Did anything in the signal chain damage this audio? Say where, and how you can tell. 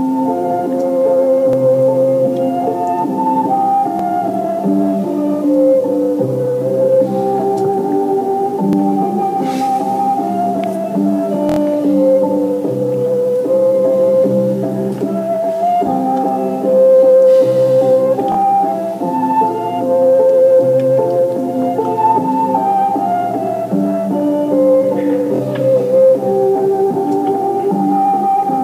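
Yes, the driver or buffer stage shows six repeated-buffer stutters, at 1.53, 3.99 and 8.73 s (one extra play each), 18.32–18.37 and 25.36–25.40 s (two extra plays), and 11.49–11.59 s (four extra plays). Each repeat lasts 23.2 ms, which fits a 1024-sample buffer replayed when fresh data arrived late. The waveform shows identical blocks tiled with hard joins, and the spectrogram shows vertical broadband lines at each seam. Essentially nothing is lost; the sound is delayed.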